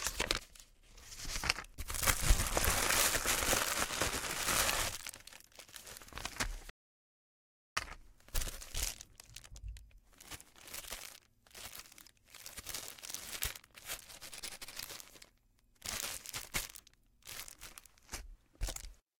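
At 6.70 s the sound cuts off abruptly mid-flow and returns just as suddenly at 7.77 s, an audio dropout to silence lasting about 1.07 s. The gap is silent, with no background or room tone, so whatever occurred in that second is simply missing. The likely cause is a momentary loss of the input signal while recording carried on writing silence. On a waveform it shows as a flat line; a spectrogram shows a fully blank vertical band with hard edges.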